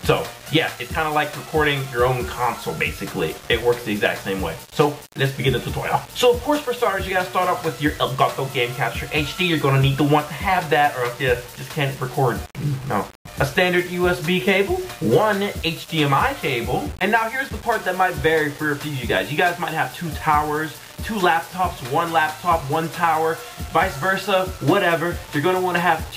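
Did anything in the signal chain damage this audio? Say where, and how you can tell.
Yes. A sample-format conversion likely rounded the audio to 6 bits without dither. This low bit depth without dither lasts throughout: the rounding error follows the signal, so quiet passages turn grainy, with distortion around 20 dB below the sound.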